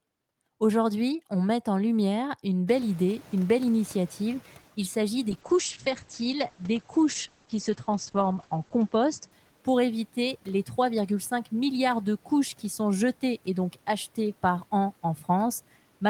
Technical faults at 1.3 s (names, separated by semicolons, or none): none